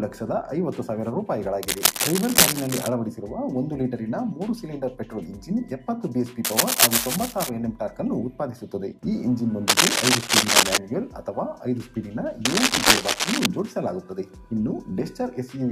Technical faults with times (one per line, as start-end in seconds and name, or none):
1.63-2.89 cable scratch noise
6.45-7.49 cable scratch noise
9.67-10.78 cable scratch noise
12.45-13.46 cable scratch noise